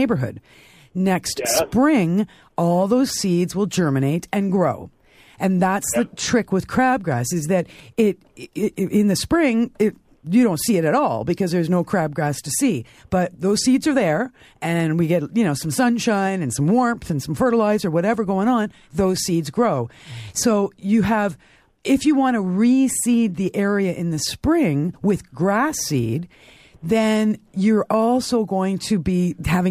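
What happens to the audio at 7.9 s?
A sudden gain jump occurs from 7.80 to 7.99 s: the level drops by about 6 dB in a single step, with the speech and the background noise falling together. This likely comes from a digital gain change applied at once rather than ramped.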